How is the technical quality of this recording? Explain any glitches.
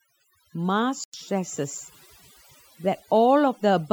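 The recording has two clear problems: heavy-handed processing across the whole clip and one brief cut in the signal.

Overdone noise removal runs throughout the speech. A noise reduction stage set too aggressively pulls individual frequency bands down or out whenever they sit close to its noise estimate, taking the softer parts of the voice with them. The background drops and breaks up into twinkling, chirpy specks. Unlike low-bitrate codec smearing, the artefacts cluster in the quiet gaps and decaying tails rather than across loud passages.

A digital broadcast dropout occurs from 1.04 to 1.14 s, a gap of about 0.1 s. The receiver lost the digital stream, or frames failed their checksum, so it muted until valid frames arrived again. The length fits roughly three lost frames. It sounds like a clean hole in the audio, and the speech resumes afterwards with that portion missing. This distinguishes it from a click or buffer underrun: there is no stutter or repeated fragment, just silence where the audio should be.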